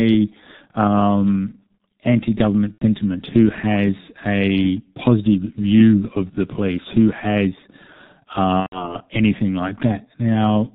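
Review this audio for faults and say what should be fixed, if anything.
The whole clip is marred by heavy G.723.1 codec damage. Everything above 4 kHz is gone, the speech is muffled and hoarse, and consonants blur. That fits the codec's 6.3 kbit/s mode modelling the voice coarsely over 30 ms frames. A simple low-pass filter would only dull the sound; it would not add this hoarseness and smearing. To prevent it, use a wideband codec at a higher bitrate.

VoIP packet loss concealed by the speech codec occurs at 2.72–2.84 s and 8.60–8.96 s. The decoder filled about 90 ms and 120 ms, consistent with three and four lost frames, by extending its last pitch and filter into a fading buzzy tone or coloured noise. A plain dropout would be silent instead, and here the voice stays weak or distorted afterwards. To prevent it, add forward error correction and a larger jitter buffer.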